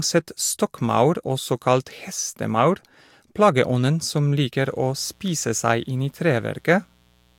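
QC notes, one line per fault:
4.53–7.38 s, mains buzz: starting right after "kalt hestemaur plageånden som" and lasting to the end of the clip, a steady, raspy buzz sits about 35 dB below the speech. Sharp switching spikes from a dimmer, a rectifier or a missing shield arrive twice in every 60 Hz cycle, filling the sound with 60 Hz harmonics up to several kHz. That rasp, not a smooth low tone, is what sets it apart from plain mains hum.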